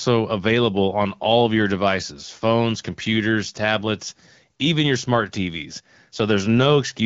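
A speech recording carried over the AMR wideband (HD Voice) codec at 12.65 kbit/s, with no technical faults to report.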